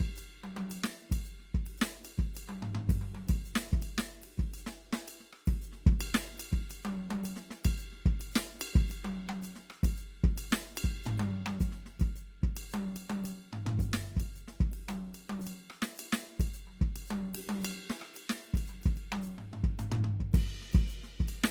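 From start to end, the music's tones sound noisy, rough and grainy while the bandwidth still reaches 20.2 kHz: likely Opus compression in CELT mode, fitting a bitrate around 24 kbps.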